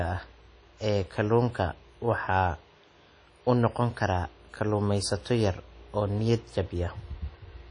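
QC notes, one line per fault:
Throughout: WMA compression. The speech has a ringing, washy quality. Its quantisation noise is smeared over tens of milliseconds around each sound. A hiss rises and falls with the signal. The damage is plainly audible. Nothing is heard above 10 kHz, so the top end sounds dull. This is likely a transform codec at a low bitrate, around 32 kbps, where long blocks spread the noise and weak spectral lines are dropped to zero.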